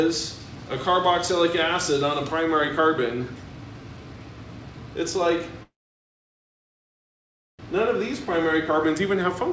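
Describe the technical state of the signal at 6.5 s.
At 6.5 s the signal is in silence, part of a call audio freeze running from 5.63 to 7.62 s: a very short fading tail of the last sound gives way to about 1.9 s of nothing. This is likely packets stalling in transit and the jitter buffer running dry. When the audio resumes, it picks up where it left off, so nothing is lost, but everything afterwards runs about 2 s late. The G.722 call path leaves nothing above 8 kHz.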